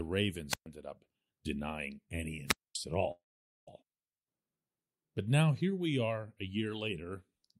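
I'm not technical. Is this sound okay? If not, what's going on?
No. At 0.49 to 0.66 s and 2.46 to 2.76 s there is a wireless microphone squelch dropout: the radio signal weakens, static rises, and the receiver mutes the speech for about 125 ms and 240 ms. From 3.11 to 3.69 s there is a call audio freeze. The sound trails off and then goes silent for about 0.46 s before continuing where it stopped, so nothing is lost. The likely cause is network data arriving late.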